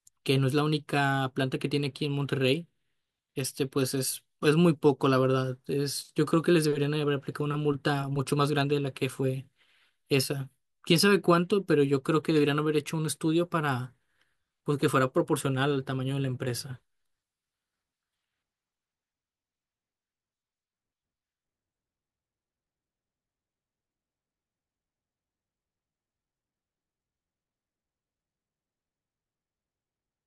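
No technical faults can be heard anywhere in this speech recording. Nothing in the signal chain draws attention to itself at any point.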